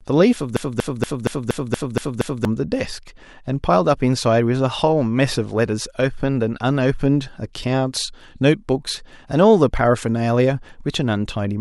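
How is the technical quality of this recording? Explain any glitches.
The recording has one clear glitch, a broken-record loop. From 0.57 to 2.45 s, playback or the stream likely stalled and kept resending its last fragment, so a 0.24 s slice of speech repeats eight times back to back, and the speech meant for that stretch is lost.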